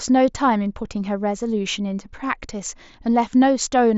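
No faults detected; the speech comes through a wideband Bluetooth headset link with nothing above about 7.7 kHz and only the light graininess typical of mSBC.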